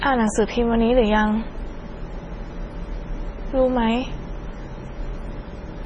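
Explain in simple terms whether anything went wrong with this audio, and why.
Throughout the whole recording, the speech sounds watery and swirly, with nothing above about 10.5 kHz and smeared consonants. That points to heavy MP3 compression, likely squeezed so hard that the encoder cut the treble and kept switching faint details on and off.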